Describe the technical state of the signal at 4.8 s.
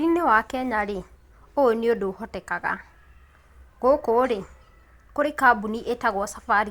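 The signal at 4.8 s is intact, with no audible technical fault at that point.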